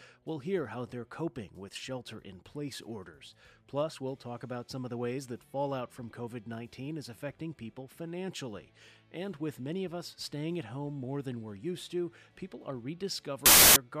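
Right near the end, from about 13.46 to 13.76 s, the audio turns into a blast of loud, harsh broadband noise. That's samples built from the wrong bytes: for that stretch the reader is stitching each sample's bytes together wrongly, off by one, swapped or misaligned. So the jittery low-order bits end up acting as the big part of every value. What should be the sound comes out as loud hiss.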